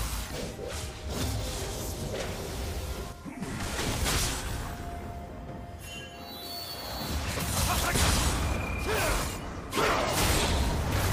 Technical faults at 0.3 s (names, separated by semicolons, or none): damaged data in a compressed stream